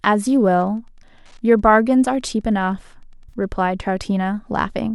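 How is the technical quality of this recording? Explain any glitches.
The recording has two glitches: a faint ticking interference through most of it, and one brief dropout near the end.

From 0.0 to 3.44 s there is Wi-Fi interference. A nearby Wi-Fi radio's transmissions were picked up and rectified by the audio circuitry, so its beacon, repeating every 102.4 ms, turns into a steady tick about ten times a second. It sits well below the speech, roughly 45 dB down, so it is a quiet but persistent ticking under the voice rather than a dominant buzz.

From 3.29 to 3.33 s there is AAC frame loss with concealment. About 30 ms of coded audio never reached the decoder, which fits three lost frames, likely of the low-delay AAC stream (AAC-ELD) carrying this speech at a rate that points to around 64 kbps. The decoder patched the gap by extending the last good spectrum, so instead of a hard dropout you hear a short smeared, slightly noisy blur in the speech.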